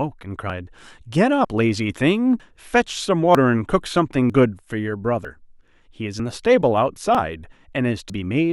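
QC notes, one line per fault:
0.50 to 8.10 s, audio missing between chunks: nine skips at a steady 0.95 s spacing. Each drops about 50 ms of speech and joins the two sides with no gap. This is likely a recorder working in 1 s chunks and losing audio at each changeover.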